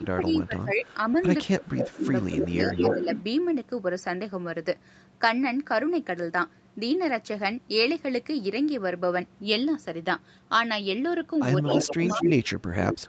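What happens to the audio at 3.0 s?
An echo leak runs from 1.45 to 3.23 s. A delayed copy of the speech, arriving 224 ms late and about as loud as the original, can be heard under it. This is likely a loudspeaker on one end whose echo canceller let the played-back sound return.

Speech suppressed in double talk overlaps it from 1.48 to 3.08 s. The speech dips by up to around 20 dB across roughly a second in total. This is likely an echo canceller that could not separate its own talker from the loudspeaker echo and turned both down.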